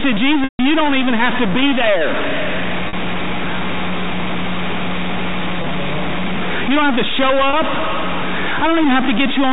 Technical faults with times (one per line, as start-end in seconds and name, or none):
0.00-9.53 stuck bit
0.44-0.59 packet loss with pitch repetition
0.81-2.51 loose connector crackle
2.88-2.93 packet loss with pitch repetition
5.56-5.66 packet loss with pitch repetition
7.15-8.95 loose connector crackle
7.50-7.53 packet loss with pitch repetition